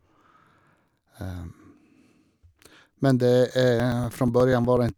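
From 3.80 s to 4.89 s the speech has periodic USB or driver dropouts. Every 0.121 s a few milliseconds of audio are skipped outright, producing about ten evenly spaced ticks. Unlike random buffer-underrun clicks, these keep a strict, clockwork rhythm.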